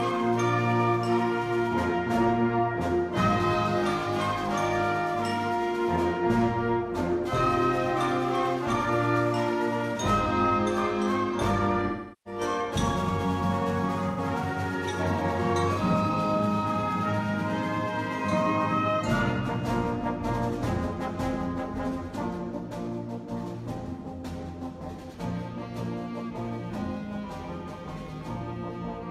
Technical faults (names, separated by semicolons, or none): AAC frame loss with concealment